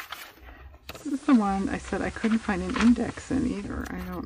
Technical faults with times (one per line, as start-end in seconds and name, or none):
0.82-3.91 digital radio blending to analogue